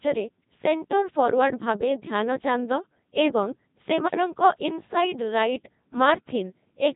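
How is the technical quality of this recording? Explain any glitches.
The technical quality is poor, with heavy vocoder damage across the whole recording.

Codec 2 vocoder, throughout: rather than keeping the waveform, the decoder rebuilds the speech from sine waves driven by pitch, voicing, energy and a spectral envelope. The result sounds robotic and buzzy, with nothing above 3.8 kHz. The heavy damage fits a rate of about 2.4 kbit/s.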